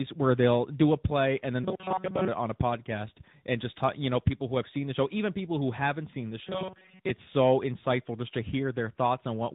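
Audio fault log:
Throughout: tandem speech coding. The speech passes through two speech codecs in a row, CVSD and then AMR-NB at 10.2 kbit/s, with a G.711 mu-law link between them. Each codec re-encodes audio that the one before it has already degraded, so the errors stack. The result is rough, muffled and warbly speech with nothing above 3.8 kHz. That upper limit comes from the narrowband AMR-NB stage at the end of the chain.
1.64–2.28 s: robotic sound from repeated short buffers. This comes between "a play and then" and "it on a podcast". The speech turns into a rigid, metallic buzz at 188 Hz that only loosely follows the words. The likely cause is audio arriving too seldom, with playback filling the gaps by looping the last short stretch. A 188 Hz buzz points to a repeated segment of about 5.3 ms, and roughly two-thirds of the audio in this span sounds like repetition rather than new material.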